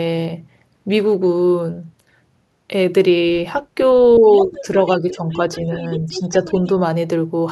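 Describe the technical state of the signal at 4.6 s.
At 4.6 s a second voice sits under the talker, about 10 dB quieter, from 4.34 to 4.61 s. This is the other side's voice leaking through, likely loudspeaker echo that the echo canceller failed to fully remove from the microphone signal.

Overlapping that, from 4.44 to 4.67 s, the talker's own level dips by about 5 dB for around 150 ms in total. That is speech suppressed in double talk, likely the canceller turning everything down because it could not separate the talker from the echo.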